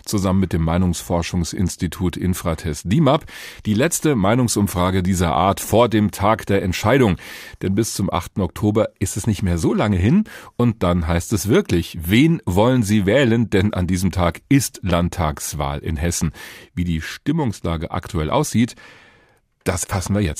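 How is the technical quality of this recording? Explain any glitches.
No technical faults can be heard anywhere in the recording; the signal stays continuous and stable throughout.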